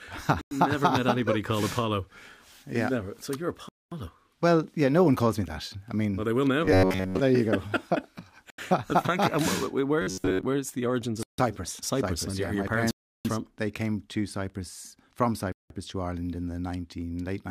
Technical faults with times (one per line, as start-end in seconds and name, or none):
0.41-0.51 Bluetooth stall
3.69-3.92 Bluetooth stall
6.65-7.19 robotic sound from repeated short buffers
8.50-8.58 Bluetooth stall
10.02-10.43 robotic sound from repeated short buffers
11.23-11.38 Bluetooth stall
12.91-13.25 Bluetooth stall
15.52-15.70 Bluetooth stall